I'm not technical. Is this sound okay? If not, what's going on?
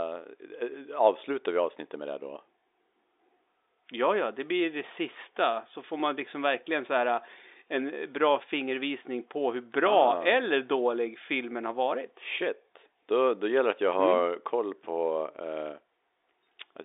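Yes, nothing is wrong with this recording. It comes through an ordinary telephone line using standard G.711 telephone coding, which is why nothing higher than about 3.8 kHz is present and it has that familiar phone-call sound.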